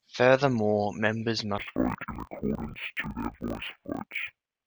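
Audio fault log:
1.58 to 4.66 s, interleaved audio read as planar: each block's alternating left and right samples were split into halves treated as channels, so both play at half speed. Speech drops an octave, doubled and choppy, stuttering every 23 ms, which fits 1024-sample blocks.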